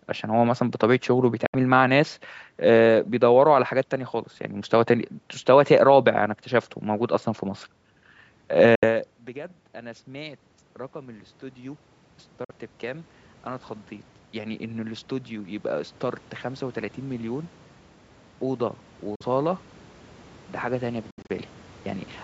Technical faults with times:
1.46-1.55 Bluetooth dropout
8.75-8.83 Bluetooth dropout
9.33-13.17 automatic gain rising
12.44-12.51 Bluetooth dropout
14.32-22.14 automatic gain rising
19.15-19.22 Bluetooth dropout
21.10-21.31 Bluetooth dropout

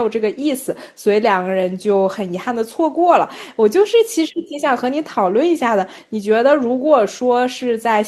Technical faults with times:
none

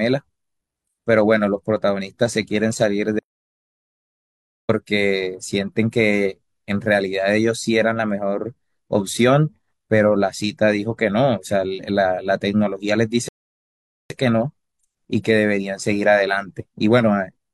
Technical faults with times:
3.19-4.69 audio dropout to silence
13.29-14.10 rebuffering stall

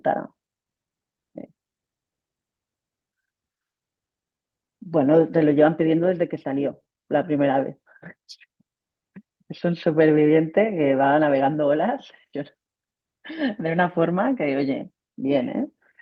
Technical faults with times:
none

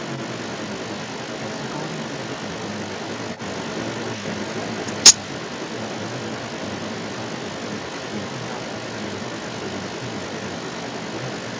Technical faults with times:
0.00-11.60 echo leak

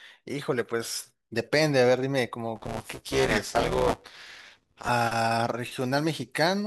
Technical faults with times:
2.56-4.89 buffer tearing

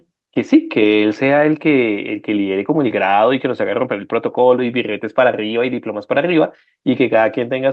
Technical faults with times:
none

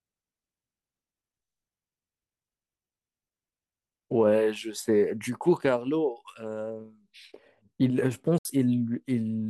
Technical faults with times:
8.38-8.45 Bluetooth dropout

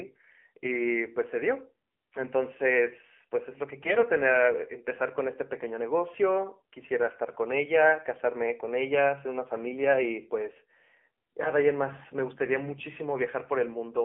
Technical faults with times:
0.00-14.04 AMR narrowband mobile codec
3.82-4.05 AMR bit errors
7.24-7.34 AMR bit errors
11.44-11.50 AMR bit errors

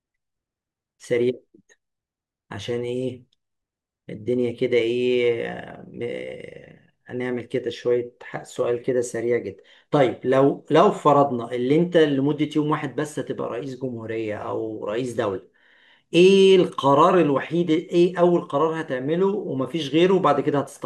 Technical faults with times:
none

